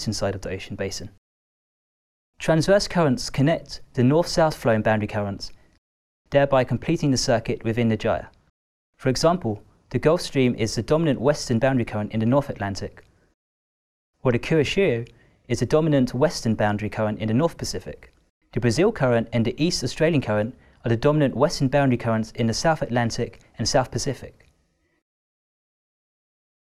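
At 4.52 to 4.54 s, a sudden voltage pulse, likely from a plug, switch or static discharge, enters the signal chain and is shaped by the circuits after it. The result is a single loud pop, peaking roughly 5 dB above the sound, which continues underneath.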